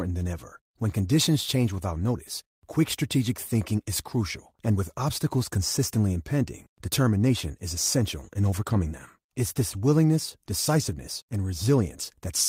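Clock drift between sender and receiver runs through the whole speech clip: the sender's clock runs roughly 4% fast, so the receiver's jitter buffer keeps overfilling. Repeated timing corrections from 0.11 s to 12.27 s trim short pieces unevenly to keep pace with that 104% rate.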